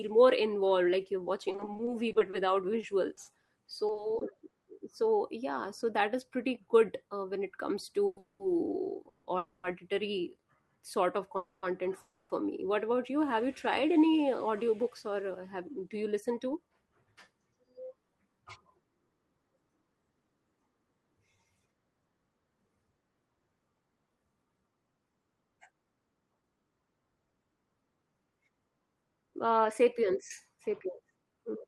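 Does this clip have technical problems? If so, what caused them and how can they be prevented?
Yes. From 1.49 to 4.53 s the speech turns choppy and robotic, with repeated packet loss: 22 short holes, none longer than 40 ms, patched by stretching the previous sound. A steadier network path or stronger forward error correction would prevent it.

Right after "yeah so that is", from 6.51 to 7.99 s, the speech sounds slightly hurried at unchanged pitch. This is a jitter buffer speed-up of 105%, trimming roughly 70 ms of pitch periods to shed excess delay. The same thing happens from 23.59 to 31.39 s at 107%, removing about half a second. A jitter buffer with a more stable target, fed by less bursty delivery, would avoid both.

The sound stalls into a fading buzz six times: at 8.06–8.19 s, 8.19–8.42 s, 9.09–9.28 s, 9.38–9.66 s, 11.37–11.65 s (just after "sort of"), and 12.01–12.32 s. Each pause lasts 110 to 290 ms, and the speech resumes with nothing lost. 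This call audio freeze was likely caused by packets held up in transit until the jitter buffer ran empty. Reducing network congestion or prioritising the media stream would prevent it.

From 8.70 to 10.63 s, ending before "sort of", the speech drags slightly at 98% speed with drawn-out sounds. This is a jitter buffer slow-down, adding 60 ms of repeated pitch periods to rebuild its reserve. Keeping packet delivery regular, so the buffer never runs low, would prevent it.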